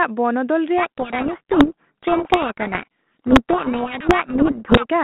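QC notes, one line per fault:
0.78 to 4.86 s, codec payload misread. The speech is buried in harsh, gritty distortion. The decoder is reading G.726 code words with their bits in the wrong order, so each sample's step is wrong. It clears at 4.86 s, leaving the light 32 kbit/s telephone-band sound.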